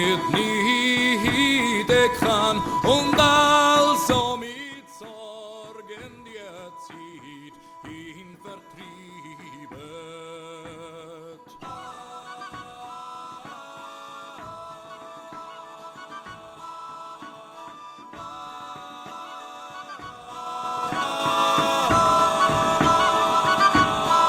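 From 4.05 to 4.77 s, the level drops by roughly 20 dB in coarse 3 dB steps, around ten per second. This is zipper noise. Nothing smooths the jumps, so each step leaves a small click. Together they form a fast ticking over the fade. From 20.19 to 21.43 s, the level rises again by about 20 dB. The 3 dB steps come slower here, about five per second. The zipping sounds sparser.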